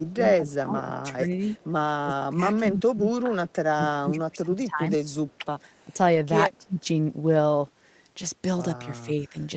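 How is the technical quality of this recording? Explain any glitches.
Three kinds of glitch affect the recording: speech suppressed in double talk in two stretches, a brief echo leak, and one lost packet rebuilt from error correction. The audio stops at about 8 kHz, as expected for an Opus call at this bandwidth.

Speech suppressed in double talk occurs from 0.0 to 5.92 s, affecting about three seconds in all, and again from 6.58 to 6.88 s. The cause is likely an echo canceller that heard this side talking while far-end sound played on its loudspeaker. It could not tell the two apart, so it turned both down, by around 20 dB at the deepest point. The voice dips, loses its top end, or drops out in pieces. On a waveform the envelope shrinks in patches. On a spectrogram the energy thins across the band in those spans.

An echo leak runs from 5.06 to 5.84 s. Most likely, one side's echo canceller failed to remove all of the loudspeaker sound its microphone picked up, and the remainder was sent back. 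The result is a single delayed copy of the voice played there, arriving 248 ms late and roughly 40 dB below the speech. It may come back in scraps or as a longer stretch, and it may sound chopped, thin or distorted. On a spectrogram it shows as a very faint repeat of the harmonic pattern, offset by about a quarter second.

A lost packet rebuilt from error correction occurs at 6.15 s. One 20 ms Opus packet went missing, and the decoder played the low-bitrate copy carried in the next packet, so there is no silence. That frame sounds rougher and noisier than its neighbours. On a spectrogram it appears as a narrow column with smeared, grainier texture. The waveform shows no gap.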